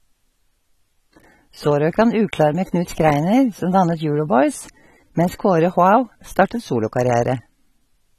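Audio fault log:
Throughout: AAC compression. The speech was likely squeezed through a low-rate AAC-LC encoder, which fits a bitrate around 32 kbps. With so few bits, the coder discards the top of the spectrum and quantises the remaining frequency lines coarsely. Nothing survives above 14 kHz, so the audio sounds dull and lacks air. The coarse coding is plainly audible, smearing detail and leaving a warbling, fizzy texture on sustained sounds and sibilants.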